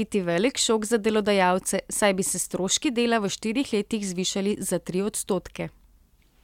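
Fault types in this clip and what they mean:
Nothing stood out on listening to this speech recording.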